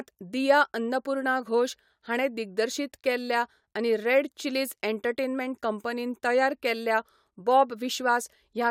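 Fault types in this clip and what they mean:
Nothing to list here; I listened all the way through this bit of speech and didn't hear any technical faults.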